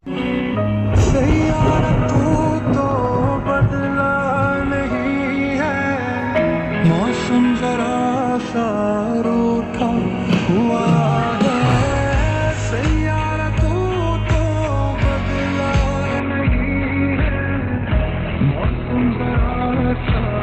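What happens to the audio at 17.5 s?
At 17.5 s you're inside an adaptive stream lower-bitrate stretch, from 16.2 s to the end. The quality drops abruptly with no gap, with nothing above 4.3 kHz, which points to a switch down to a much thinner encode.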